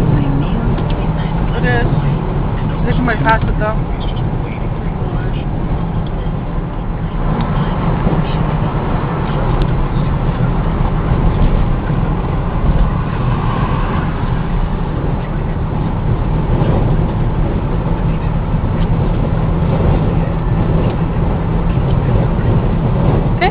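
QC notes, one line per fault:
No faults to note.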